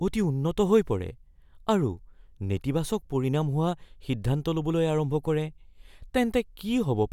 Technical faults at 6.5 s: none

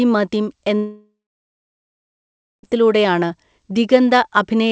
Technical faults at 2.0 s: long network dropout

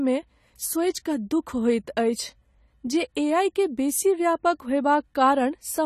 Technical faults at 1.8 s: AAC compression

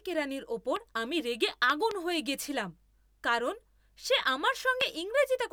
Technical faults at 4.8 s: loud pop

